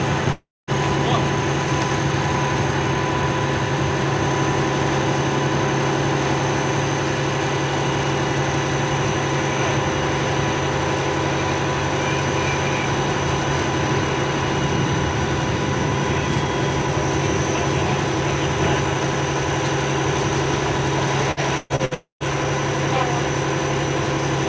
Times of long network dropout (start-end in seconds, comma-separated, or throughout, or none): 0.32-0.70, 21.94-22.23